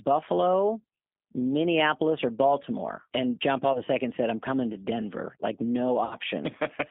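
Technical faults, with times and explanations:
Throughout: G.729 codec. An 8 kbit/s G.729A coder rebuilds the speech from a filter and sparse pulses within a 200 Hz to 3.5 kHz line band, leaving it rough and synthetic.
3.73 to 3.81 s: VoIP packet loss concealed by the speech codec. About 20 ms of packets went missing just before "said I'm coming to", and the decoder extrapolated and faded the previous frame. The result is a brief smear of buzzy tone or coloured noise that takes a moment to recover.
6.05 to 6.15 s: VoIP packet loss concealed by the speech codec. A longer gap of about 60 ms was filled by stretching the last pitch with falling gain, so the speech turns into a fading buzz or coloured noise before it recovers.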